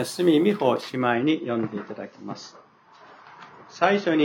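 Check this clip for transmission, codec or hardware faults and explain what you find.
There is one fault. From 1.13 s to the end, the adaptive stream drops to a lower bitrate: the connection slowed, so the player switched to a leaner encoding, which sounds like a fall from around 96 to around 24 kbit/s. Nothing above 6.9 kHz survives, so the top dulls and artefacts rise. Unlike a dropout, the change is sudden, seamless and sustained.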